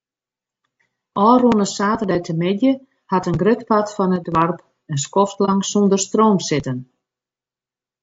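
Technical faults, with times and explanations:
Throughout: low-delay AAC compression. The speech was most likely carried through a low-delay AAC coder of the kind used for video calls, and the damage is plainly audible, which fits a bitrate around 32 kbps. Its short frames cannot separate pitch harmonics cleanly and spend bits inefficiently, so the voice sounds rough and grainy, with noise filling the gaps between harmonics and a top band that sounds lowered or synthetic.
4.16 to 4.32 s: sudden gain jump. The digital gain most likely changed between one sample and the next with no ramp, as when a level setting or a bit shift is applied abruptly. The speech and the background noise drop by about 6 dB together at 4.16 s, and the lower level holds until 4.32 s. Because the step is instantaneous, the level change arrives as a hard edge rather than a smooth fade.
5.45 to 5.50 s: AAC frame loss with muting. 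A coded block of audio failed to arrive, and the decoder filled its spectrum with zeros. That leaves a gap of about 30 ms, consistent with a single lost frame. The overlapping transform windows taper the speech out into the gap and back in afterwards, so the dropout sounds like a brief, soft-edged hole rather than a hard cut.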